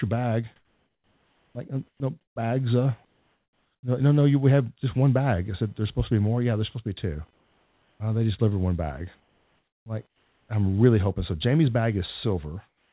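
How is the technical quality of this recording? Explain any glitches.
The recording has clear technical faults: a constant interference buzz and several stretches where the speech or background is replaced. It came through a call path with nothing above 4 kHz, which fits a narrowband G.711-type codec.

Computer activity noise runs throughout. A faint buzz pulsing around 500 Hz, roughly 40 dB below the speech, comes from processor or peripheral load disturbing the audio ground.

Between 0.56 and 2.36 s the speech is chopped by the voice detector. Quiet syllables and word edges drop into synthetic fill, likely from the sender's detector toggling transmission repeatedly.

Comfort noise replaces the background at 3.05–3.83 s, 7.34–8.0 s, 9.2–10.49 s and from 12.68 s to the end. The real room sound becomes flat, featureless hiss, about 3, 5 and 6 dB quieter where measured. This is likely discontinuous transmission with receiver-generated noise.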